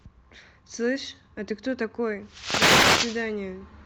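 At 2.25 s a wireless microphone noise hit comes in and lasts until about 3.31 s, roughly a second. The analogue FM link from the mic dips as reflected copies of the radio signal cancel each other, and the receiver's own noise climbs up through the speech, so you hear a swish of static washing over it. It all comes through a call codec path whose top end stops around 8 kHz, which fits Opus in wideband mode.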